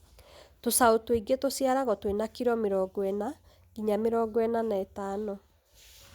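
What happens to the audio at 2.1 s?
Nothing goes wrong at 2.1 s: the speech runs through that moment intact, with no dropout, click or distortion.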